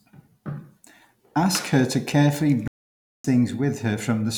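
At 2.68 s, right after "her to carefully", the speech cuts off mid-flow and the output goes completely silent until 3.24 s, a gap of about 0.57 s, before continuing. This is a playback stall, most likely the player running short of data or its thread being held up. A natural pause falls between phrases, but this one breaks the phrase. A brief dropout would be a short click or blink rather than a gap this long.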